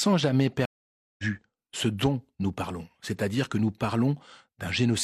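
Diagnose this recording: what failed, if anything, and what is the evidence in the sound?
A stream reconnect at the network stage interrupts the speech from 0.65 s to 1.24 s. The connection dropped and the audio cuts to 0.53 s of silence. When the player reconnected and started a new decoder, the speech resumed about 0.4 s further into the stream, so that stretch is skipped. On a waveform this shows as a flat gap with abruptly mismatched content on either side. A spectrogram shows a blank vertical band with a soft onset as the first decoded frames come back.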